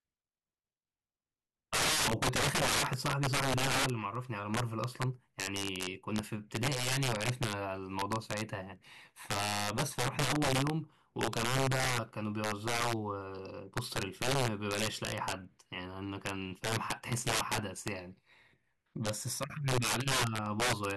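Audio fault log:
Throughout: integer overflow. The loudest peaks of the speech break into violent, hard cracks far sharper than ordinary clipping distortion, on a small fraction of samples, roughly 3 percent. The signal was pushed about 13 dB past full scale, and instead of being limited at the ceiling, each sample beyond the largest integer wrapped around to the opposite extreme, so the waveform jumps across the entire range in a single step wherever the level runs too high.
0.39 s to 20.88 s: word clock ticks. A steady train of sharp ticks of uneven strength runs through the speech, about fifty of them, roughly one every 0.4 s. This is the sound of a digital link read by a device on its own unlocked clock. The two clocks differ slightly, around 50 parts per million, and each time they slide past each other a single sample is dropped or repeated, leaving a brief discontinuity at a regular interval.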